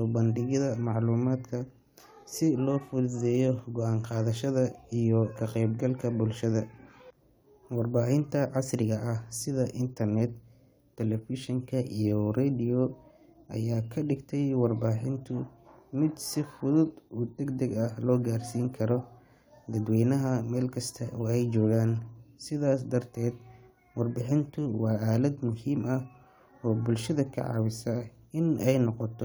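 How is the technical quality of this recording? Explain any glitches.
No technical faults can be heard in the signal of this speech recording, so there are no glitches to explain.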